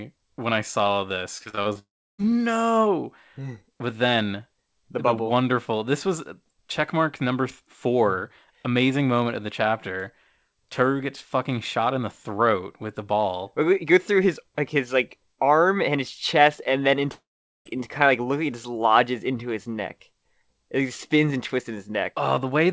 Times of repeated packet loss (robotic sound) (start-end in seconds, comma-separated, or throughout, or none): 1.38-1.77